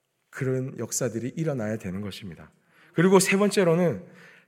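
At 1.12 s there is a block of digital silence. The speech drops out for about 1.3 ms and returns with no fade. The gap fits a 64-sample buffer left unfilled in time. It is too short to hear as a hole and comes through as a tick or dip.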